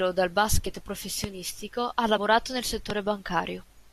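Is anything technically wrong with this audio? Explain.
Yes. There are two kinds of fault in this speech recording.

Compressed frames skipped, at 0.65 s and from 2.16 to 2.18 s: the decoder never played some of the encoded frames, either because they were missing or because it rejected them as corrupt. At 0.65 s the gap is around 20 ms, which fits one frame of about 23.2 ms. At 2.16 s the gap is around 50 ms, which points to two frames. The speech jumps forward at each spot.

Loud pop, at 1.24 to 1.26 s and 2.90 to 2.93 s: a sudden voltage pulse was added to the signal, likely an electrical transient from a switch, static discharge or driver glitch. Each event is a single sharp pop on top of the speech, which continues underneath without a break. The first peaks about 10 dB above the surrounding signal and the second about 15 dB, so the later pop is louder.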